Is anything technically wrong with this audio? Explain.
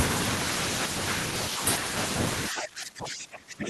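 Yes, there's one problem. From about 2.49 s to the end, the speech gets suppressed in double talk: the level sinks hard, something like 25 dB at its deepest. That's likely an echo canceller that couldn't tell the near talker from loudspeaker echo, so it pulled both down.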